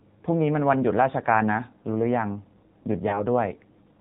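A short speech clip that's been through the AMR narrowband mobile codec the whole way. Nothing gets above 4 kHz, so it's boxed-in and muffled, and the thin, buzzy, synthetic edge on the voice is plainly audible, which fits one of the lower AMR-NB modes, something like 7.4 kbps. Then there's a lost AMR speech frame between about 3.10 and 3.23 s. That sounds like a single dropped 20 ms frame: the decoder patches over the gap with the previous frame's pitch and vocal tract settings at reduced gain, so you get a quick dip or a bit of warble before the voice settles back in.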